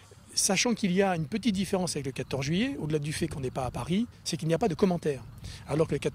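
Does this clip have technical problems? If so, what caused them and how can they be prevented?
No, no technical faults here.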